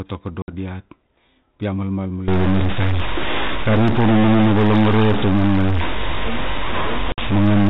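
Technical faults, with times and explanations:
0.42–0.53 s and 7.12–7.24 s, packet loss on an ADPCM call: each time about 60 ms of the G.726 stream, roughly three packets, drops out as a hard-edged silent gap. The decoder's adaptive predictor and step size lose track of the sender's, so speech returns slightly distorted before settling.
2.28 s to the end, stuck bit: just after "pi a malmal" a distortion sets in and stays. One data bit is held at a fixed value, likely from a faulty line or converter, so about half the samples are offset by that bit's weight. Quiet stretches fill with noise as small values flip sign.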